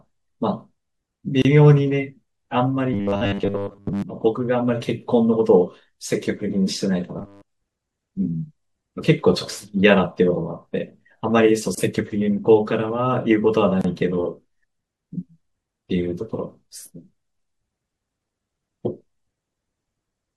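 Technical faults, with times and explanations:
1.42–1.45 s, 11.75–11.78 s and 13.81–13.84 s: gap at a join of encoded pieces. Separately encoded segments were joined without trimming each run's start-up delay and final-frame padding. Silences of about 30 ms, 27 ms and 30 ms open in the speech, with smeared edges, before the sound resumes where it stopped.
2.93–4.02 s and 7.19–7.49 s: robotic sound from repeated short buffers. New audio likely arrived too seldom, so playback filled time by looping a roughly 10 ms slice while most of the real audio was skipped. The loop imposes a fixed 100 Hz buzz, giving a rigid metallic sound that still loosely follows the speech.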